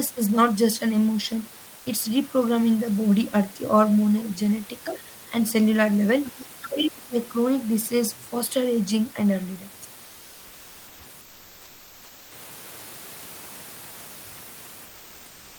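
At 1.77 s a brief gap of 80 ms shows comfort noise in place of the background. The room noise, which sits about 24 dB under the speech, gives way to a smooth, featureless hiss about 1 dB quieter. This is likely discontinuous transmission of the kind Opus DTX uses: the sender pauses and the receiver fills the gap with synthetic noise. On a spectrogram the textured background turns into a uniform smear. The waveform shows a steady, even band.

From 6.24 to 6.88 s the other side's voice leaks through, a faint second voice well below the talker. The likely cause is that the echo canceller left part of the loudspeaker signal in the microphone feed. A spectrogram would show a weak second set of harmonic bands woven under the main speech.

From 6.69 to 7.15 s the talker's speech is suppressed in double talk. As the leaked voice overlaps, the echo canceller likely mistook the talker for echo and pulled both down. 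The talker's voice sinks very deeply for about half a second. The waveform envelope collapses to a thin trace, and the spectrogram goes dark.

Comfort noise returns for two longer stretches. From 11.21 to 12.31 s, 1.1 s of background is replaced by synthetic noise about 3 dB quieter. From 14.85 s to the end at 15.58 s, about 0.73 s is replaced at about 2 dB lower. Each switch is a step down in noise level to a smoother, grainless texture.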